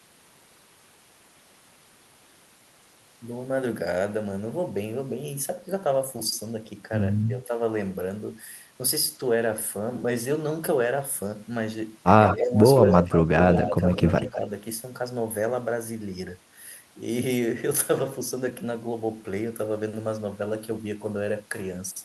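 Speech with two kinds of fault. The speech is suppressed in double talk at 7.27–7.55, 12.37–12.54, 13.07–13.13 and 14.3–14.43 s, dipping by about 10 dB (about 5 dB at the last). It is likely an echo canceller ducking during overlap, so the speech dips rather than dropping to silence. Echo leak appears at 12.27–12.37, 12.76–13.17 and 13.55–14.37 s as a distinct delayed copy 164–199 ms behind, about 5–10 dB down. That separate repeat, not smeared reverberation, points to likely residual loudspeaker echo.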